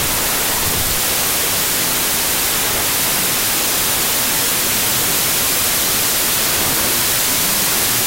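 From start to finish the audio suffers from a wrong sample width. Data written as 32-bit integers are being read as 16-bit integers, so each original sample is split into two values. One keeps the upper bits of the real signal, and the other is made of low-order bytes that act as loud broadband noise. With twice as many samples, playback runs at 0.5 times speed, an octave low, and the speech sits buried beneath hiss.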